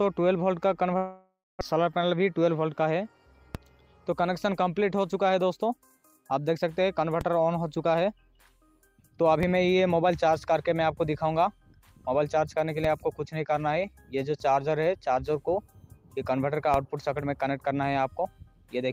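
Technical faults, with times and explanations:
0.97 to 1.63 s, long network dropout: The audio stops arriving, likely because the stream was interrupted. About 600 ms is lost. The last sound is stretched into a fading buzz for about 634 ms, ending in roughly 210 ms of near silence before the audio resumes.
3.55 s, 7.21 s, 9.43 s, 12.84 s and 16.74 s, DC step: At each of these moments the waveform's zero line suddenly jumps to a new offset, which then drains away through a 5 Hz high-pass. Each step is heard as a brief low thump under the audio, which carries on unchanged.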